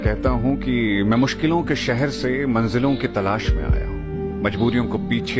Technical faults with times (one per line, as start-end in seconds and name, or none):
none